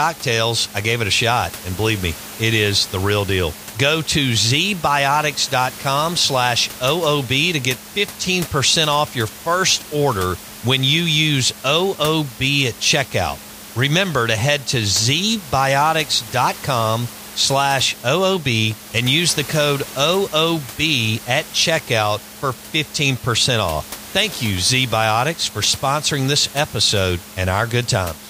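There are no technical faults in this speech, only room noise sitting about 17 dB below the voice.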